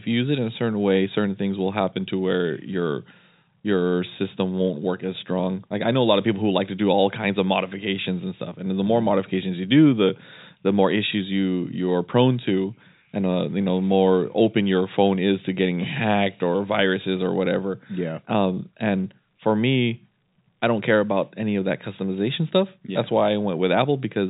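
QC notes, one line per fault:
No faults found in this speech clip.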